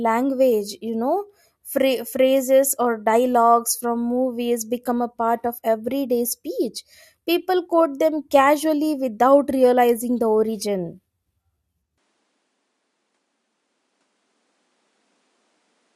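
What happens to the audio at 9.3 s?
Nothing goes wrong at 9.3 s; the audio runs through that moment intact, with no dropout, click or distortion.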